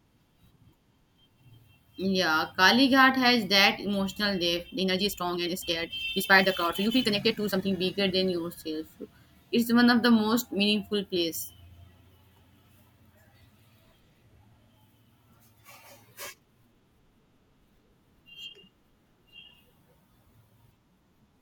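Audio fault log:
4.74–7.74 s, time-stretched section: after "has that emotional depth", pace jumps 1.76x at unchanged pitch, choppy and rushed, likely from dropped pieces; spectrogram shows compressed syllables, steady harmonic spacing.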